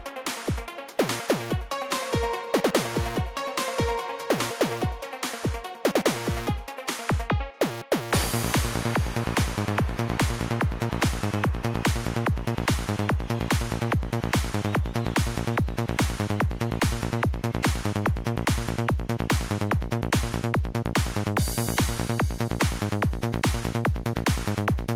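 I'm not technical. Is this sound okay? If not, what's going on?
Yes, nothing in this recording sounds wrong to the ear. There are no dropouts, glitches or other problems anywhere in it.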